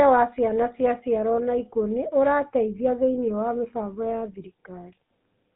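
From start to finish the speech carries GSM full-rate codec damage: a plainly audible buzzy, gravelly roughness from pulse-driven vocal-tract modelling, consistent with roughly 13 kbps. The band runs about 150 Hz to 3.7 kHz, with nothing above 3.8 kHz.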